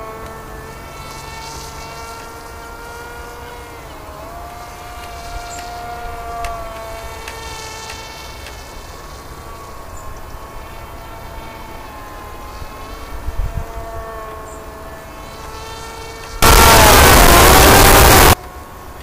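From 16.42 to 18.33 s, the samples were likely written as 32-bit floating point but read back as 32-bit integers, a float read as integer fault. The sign and exponent bits then end up setting each sample's value, so the waveform flattens into a near-square shape at an almost fixed, high level regardless of how quiet the original was. The passage turns very loud and harsh, with background noise as loud as the main sound, though its pitch can still be followed.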